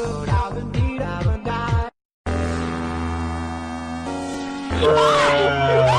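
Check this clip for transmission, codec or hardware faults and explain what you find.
Nothing stood out on listening to this clip that would point to a problem with how it was transmitted, encoded or recorded.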